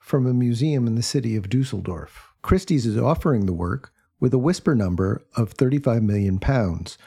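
No technical faults can be heard anywhere in this speech recording.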